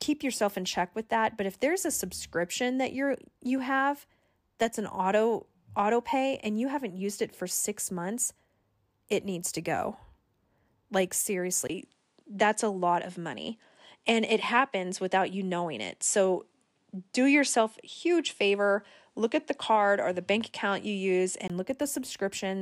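At 11.67 s, a 20 ms gap. Then nothing above 11.4 kHz, with faint new hiss, until 21.50 s. Likely input switched to a poorer device.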